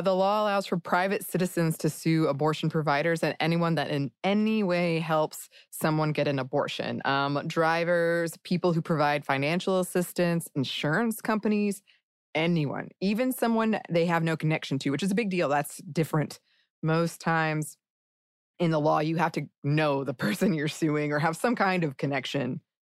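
No technical faults detected.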